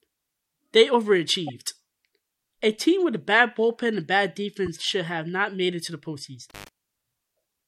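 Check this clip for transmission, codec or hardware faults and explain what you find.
Three faults are in the speech, of two kinds. At 1.47–1.51 s and 4.66–4.68 s, a corrupt frame was decoded: flipped bits in one or two compressed frames were played anyway, putting energy at wrong frequencies as a short chirp, squeak, blip or burst of noise. From 6.50 to 6.69 s, an intermittent contact opens for about 100 ms, cutting the sound out with crackle at each edge.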